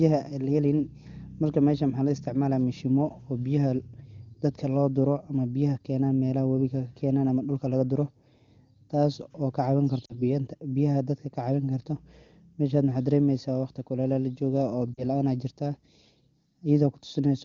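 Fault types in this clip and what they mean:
Lost AMR speech frames: at 10.05 to 10.22 s and 14.94 to 15.04 s, about 40 ms of coded speech vanished, which fits two 20 ms frames. The decoder repeated the last pitch and vocal tract settings at falling gain, so speech briefly smears, dips, then returns slightly rough.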